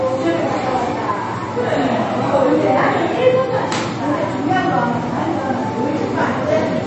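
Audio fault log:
Throughout, MP3 compression: the sound is dull and watery, with swirling, chirpy detail and softened attacks. Nothing reaches above 8.3 kHz, which shows as a flat ceiling on a spectrogram with patchy, flickering holes below it. This plainly audible damage likely comes from a low bitrate near 32 kbps.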